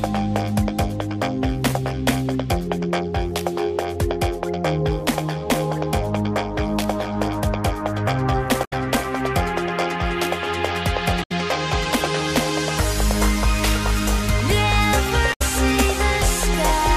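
The audio has three short bursts of damaged data in a compressed stream, at 8.64 to 8.73 s, 11.22 to 11.32 s and 15.32 to 15.42 s, each lasting roughly a tenth of a second and heard as a brief chirp or blip. Corrupted bytes in the encoded file make the decoder misread or reject the frames at those points, lose sync and search for the next valid frame header before normal playback resumes.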